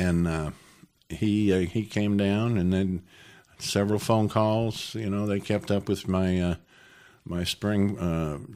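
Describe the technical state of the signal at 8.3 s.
At 8.3 s the signal is intact, with no dropout, distortion or other fault audible at that point in the speech.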